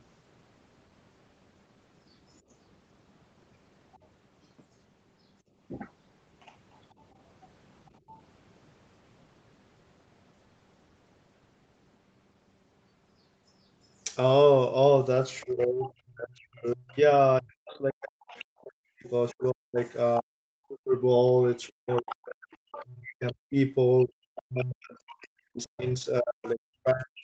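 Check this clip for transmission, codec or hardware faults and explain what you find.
Three kinds of echo-canceller fault are audible in this speech, all from the far-end loudspeaker path. The audio stops near 8 kHz, which fits a wideband Opus call at roughly 24 kbps.

Other side's voice leaking through, at 3.94 s, 8.07–8.20 s, 15.41–19.91 s, 21.68–24.05 s and 25.63–25.92 s. This is likely residual echo that the canceller failed to subtract from the microphone. The early scraps sit far below the talker, around 30 to 35 dB down. The longer stretches rise to roughly 20 dB below.

Background gated by the echo canceller, at 5.42–5.54 s. While the loudspeaker played, the canceller clamped the microphone. The room sound dips by about 15 dB for about a tenth of a second, then returns as the gate releases.

Speech suppressed in double talk, from 15.46 s to the end. With both sides talking, the canceller likely could not tell the near talker from the echo and turned everything down. 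The talker's voice dips, dulls and breaks up, with drops reaching around 40 dB.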